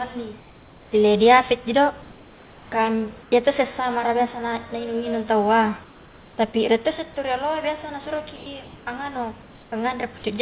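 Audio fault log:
0.4–0.92 s (ending before "ile diapetji do"), 2.02–2.72 s (after "ile diapetji do"), 3.22–3.32 s (before "iyatosse samara biasa na"), 5.84–6.38 s, 8.64–8.86 s, 9.42–9.72 s: comfort noise in place of the background. In each pause the room's background, about 28 dB below the loud parts, turns into a smooth, featureless hiss. It is about 1 to 3 dB quieter, except about 1 dB louder at 8.64 s. This is likely synthetic noise generated by the receiver while the sender stopped transmitting. On a spectrogram the patches look flat and uniform, with no fine texture.
8.36–8.46 s: sound dropped by the voice detector. About 50 ms of real sound is lost and replaced by 0.1 s of steady noise. The likely cause is the sender's detector mistaking a quiet stretch for background. The waveform shows the sound abruptly falling to a flat noise floor before it resumes.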